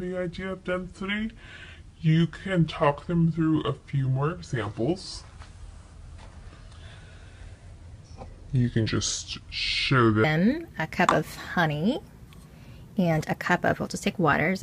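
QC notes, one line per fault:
0.00–10.24 s, section at the wrong speed: the audio runs at 0.669x, about two-thirds speed, so everything drags and sits roughly seven semitones low before snapping back to normal pace and pitch. It was likely played against the wrong clock, which slows timing and pitch together.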